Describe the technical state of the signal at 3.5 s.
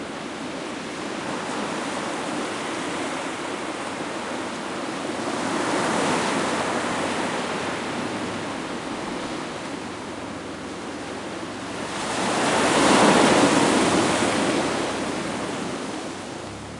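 At 3.5 s the sound plays through intact, with no dropout, distortion, glitch or other technical fault.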